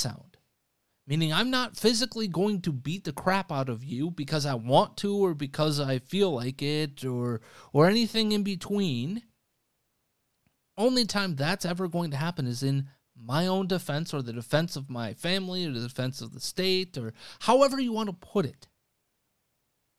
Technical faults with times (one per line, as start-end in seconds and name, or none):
none